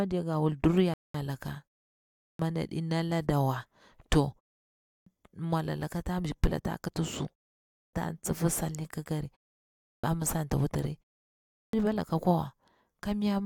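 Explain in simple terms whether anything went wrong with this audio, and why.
Two problems can be heard.

Just under a second in, from 0.94 to 1.15 s, the speech stops dead and then carries on exactly where it left off. That is a rebuffering stall: the player ran out of downloaded audio and waited about 0.21 s for more to arrive. No speech is missing; the gap simply adds that much time to the playback.

The second problem repeats five times, at 2.03, 4.72, 7.59, 9.70 and 11.41 s. Each time the speech comes back after a short pause of roughly 0.3 to 0.5 s, its opening is missing and it starts abruptly. This is a clipped start after a pause. The playback device drops into a power-saving sleep during the quiet and needs time to wake up again, so the first 0.32 to 0.36 s of each new stretch of speech is swallowed.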